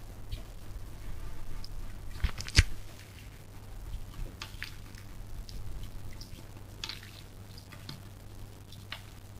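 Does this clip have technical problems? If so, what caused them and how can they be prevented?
Yes. Grainy distortion runs throughout and tracks the sound, with quiet passages turning gritty and the error sitting roughly 20 dB below the signal. Low bit depth without dither is the likely cause, with rounding to a coarse grid consistent with 8-bit. Adding dither before reducing bit depth, or keeping 16 bits or more, prevents it.

From 4.06 s to the end, a metallic buzz comes from a level ripple of about 6 dB pulsing at around 100 Hz. This is overlap-add ripple: the frames are windowed and overlapped in a way that does not sum to constant gain. Using a window and hop size pair that satisfies the constant-overlap-add condition prevents it.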